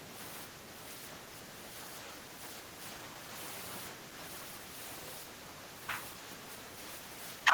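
Speech drops in level twice, from 3.95 to 4.17 s (about a fifth of a second) and again from 6.4 s through to the end at 7.54 s, each time by roughly 5 dB. On a waveform the envelope visibly shrinks. The likely cause is speech suppressed in double talk: with both ends talking, the echo canceller mistook this talker for echo and attenuated it.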